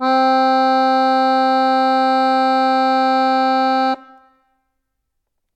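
A short music excerpt, with no technical faults to report. Nothing in it calls for a time or a cause.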